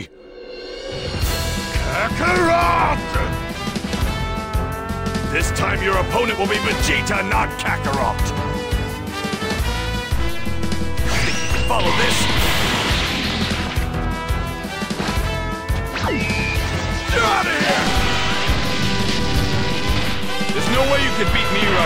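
At 10.13 s a DC step occurs. The waveform's zero line suddenly shifts. The offset is about -21 dBFS. It sounds like a low thump or click. The audio itself carries on unchanged through it. The offset holds until 12.66 s. There the baseline returns, and a second thump is heard. Such a jump points to a converter recalibrating or an offset input being switched into the path.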